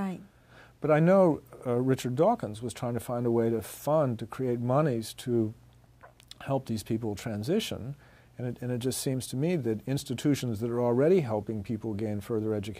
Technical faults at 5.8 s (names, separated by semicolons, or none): none